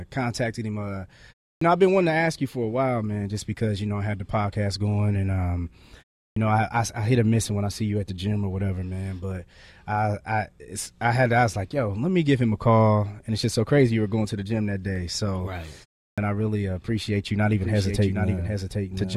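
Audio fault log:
1.55, 6.30 and 16.11 s: clipped start after a pause. After pauses of roughly 0.3 to 0.35 s, each onset is cut off by about 64 to 66 ms as the output wakes, as at "know I I I" following "podcast going and um".
14.96 and 16.41 s: dropped samples. Two sharp single clicks, the first just after "to the gym that", likely from a fraction of a millisecond of samples missing from the stream.
17.52 s to the end: doubled audio track. After "appreciate you not", a full-band copy about 5 dB quieter trails roughly 0.7 s behind and starts abruptly, likely from a second, slower capture path.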